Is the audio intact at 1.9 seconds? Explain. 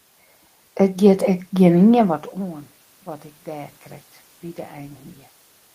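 Yes, the audio is intact at 1.9 seconds: any shift in level around 2 seconds comes from the talker moving relative to the microphone, and the steady background is ordinary room noise, neither of them a fault of the system.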